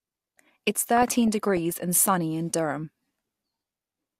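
DAB burbling, 0.97 to 1.81 s, before "sunny in": uncorrected bit errors corrupt audio samples, putting short blips of noise in single sub-bands over the speech.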